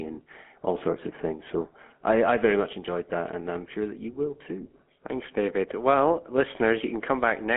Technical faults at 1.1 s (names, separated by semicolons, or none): GSM full-rate codec